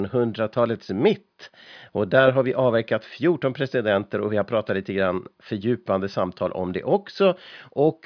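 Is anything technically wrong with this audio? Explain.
No, the speech signal shows no technical faults anywhere in the recording.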